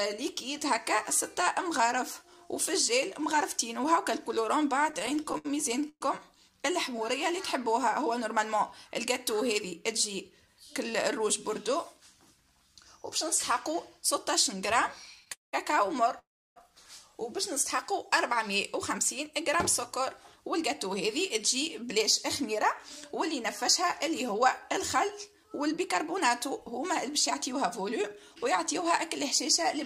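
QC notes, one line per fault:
4.89–6.03 s and 15.20–15.55 s, repeated stalls (stutter): packets kept showing up late, so the jitter buffer kept draining and the last sound got stretched to fill in. The first run has 14 gaps totalling 294 ms, the longest 120 ms, about a quarter of the span. The second has 4 gaps totalling 226 ms, the longest 198 ms, about 65% of it. Nothing is lost, it just drags and stutters.
16.19–16.58 s, call audio freeze: the audio stops for 371 ms, with a brief carry-over of the last sound fading into 310 ms of silence, then picks up right where it left off. It's likely packets held up in transit emptied the buffer, adding 371 ms of delay with nothing missing.
21.82–29.62 s, jitter buffer speed-up: the buffer was holding more than its target, so the receiver kept snipping out tiny pitch-period-sized pieces to catch up, around a fifth of a second in total. The sound runs at 103% speed with the pitch unchanged.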